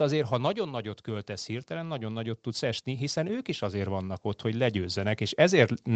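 From 1.05 s to 5.78 s the automatic gain rises: the gain control judged the input too quiet and raised it steadily by about 11 dB, so speech and background swell together over several seconds, below the call path's 8 kHz band limit.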